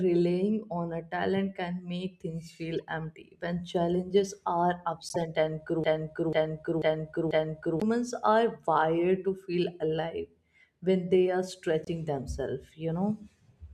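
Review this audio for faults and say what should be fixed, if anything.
The corrupt frame decoded fault appears three times in this speech: a brief faint blip at 2.74 s, a louder burst from 5.08 to 5.17 s, and a moderate squeak from 11.85 to 11.88 s. Damaged compressed frames were played anyway, putting energy at the wrong frequencies. Unlike clicks, each lasts about the length of the damaged frames. Prevent this with error detection that conceals or mutes bad frames.

A broken-record loop runs from 5.84 to 7.82 s, where a 490 ms piece repeats exactly four times back to back, and the speech that belonged there is lost. A stalled stream or player likely kept resending its last fragment. Unlike a stutter, the repeats are identical and fairly long. Prevent this with buffer-underrun handling that inserts silence rather than replaying old data.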